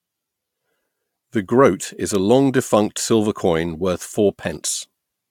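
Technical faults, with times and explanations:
No technical faults are audible in this speech recording.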